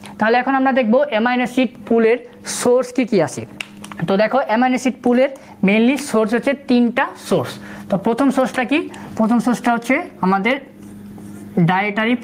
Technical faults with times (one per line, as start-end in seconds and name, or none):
0.00-12.23 gain pumping